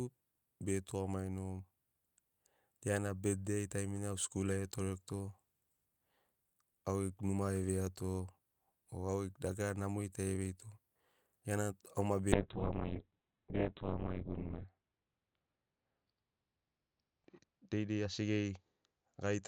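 At 12.33 s a call bitrate drop sets in and lasts to the end of the clip. The sound loses its top end: the bandwidth falls from 20 kHz to 4 kHz, so the speech turns muffled, and it also takes on a rough, watery texture. That combination fits the encoder being pushed from about 48 kbps down to around 6 kbps, with the worst stretch lasting about 2.31 s. Unlike packet loss, there are no gaps or dropouts. Unlike a plain low-pass filter, the coarse coding grain comes along with the dulling.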